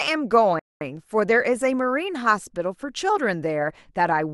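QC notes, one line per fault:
0.59–0.81 s, rebuffering stall: the speech halts into about 0.22 s of silence, then picks up exactly where it stopped, because playback ran dry waiting for data. Unlike a dropout or packet loss, no audio is skipped; the pause simply lengthens the clip.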